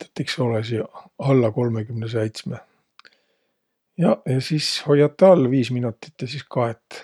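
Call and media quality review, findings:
No findings in the call and media quality review for this speech.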